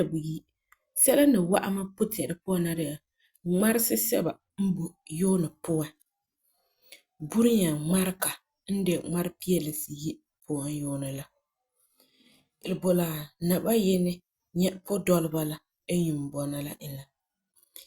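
At 12.61 to 12.67 s the speech jumps abruptly forward with a short blip, likely a stream segment skipped after one chunk failed to load. Unlike a dropout, there's no silent gap to wait through. The sound simply resumes further along, with material missing.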